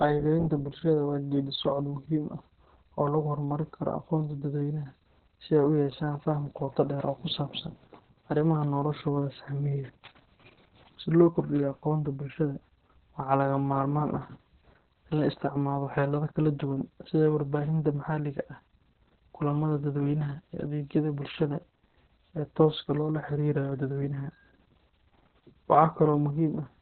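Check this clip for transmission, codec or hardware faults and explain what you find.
One codec fault runs through the whole clip: Opus voice compression. From start to end, nothing sounds above 4.4 kHz. That points to narrowband SILK at a very low rate, around 6 kbps. The coder models speech with linear prediction and spends few bits on the excitation. The result is muffled, hoarse and slightly robotic speech. The damage is heavy.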